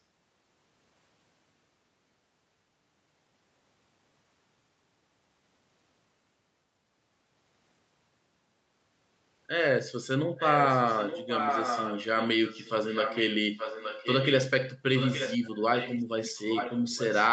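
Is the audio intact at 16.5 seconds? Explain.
No. From 16.23 to 17.15 s there is an echo leak: the far end's echo canceller likely failed to remove what its microphone caught from its loudspeaker, so a copy of the speech returns about 0.87 s late and roughly 10 dB quieter.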